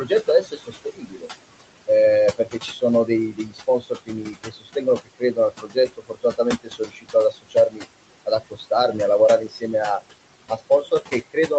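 Throughout the clip, noise suppressor artifacts: the room noise is pulled down by about 21 dB between phrases, seen as patchy, flickering low-level texture in the spectrogram gaps. Speech cut by the noise suppressor appears at 0.05–1.29 s, 2.38–7.85 s, 8.26–8.95 s, 9.47–9.74 s and 10.49–11.51 s. Quiet speech was treated as noise, with dips up to about 21 dB, deepest in the long middle stretch, so parts of the speech sound swallowed or faint. The waveform shows abruptly shrunken stretches, and the spectrogram shows faded speech energy.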